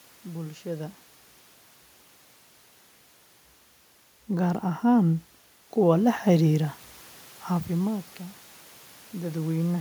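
From 4.26 s to 6.29 s, automatic gain rising: the automatic gain control judges the input too quiet and raises its gain by about 5 dB over roughly two seconds. Because the gain sits ahead of everything the microphone picks up, the speech and the room noise swell together. The rise is gradual, and unlike the level shifts near half a second and around 7.5 s, where the talker moves relative to the microphone, it lifts the background along with the voice.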